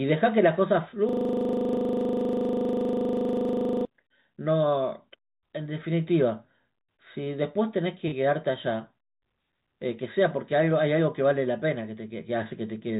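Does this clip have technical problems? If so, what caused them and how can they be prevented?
Yes. From 1.09 to 3.85 s there is a system hang loop. The same 40 ms slice of speech repeats back to back at 25 Hz, about seventy times. It sounds like a rapid machine-gun stutter rather than a steady buzz. This happens when the computer or audio driver stalls while the sound hardware keeps replaying its ring buffer, and the 40 ms period suggests a buffer of that length. To prevent it, fix the driver or system stall, for example with updated drivers and a watchdog that mutes output when the buffer stops being refilled.

Two short concealed packet losses follow, at 7.24 to 7.28 s and at 8.08 to 8.14 s, with gaps of about 20 ms and 40 ms. In each, audio arrived too late for the decoder, so the receiver extended the preceding sound to cover the hole and then crossfaded back into real speech. The result is a brief smear or wobble, and a short consonant can drop out. 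To prevent this, give the call a more stable network path, or a larger jitter buffer or forward error correction.

The band limit at 4 kHz, which fits a G.711 A-law call path, is heard as the expected narrowband telephone sound.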